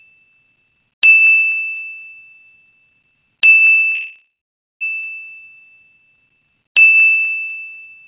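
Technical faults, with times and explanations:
3.94–4.83 s, call audio freeze: the last sound is drawn out as a buzz or hiss that fades into about 0.54 s of silence, likely because packets stalled and the jitter buffer ran empty. The audio then resumes where it stopped, with nothing lost but everything after it 0.87 s late.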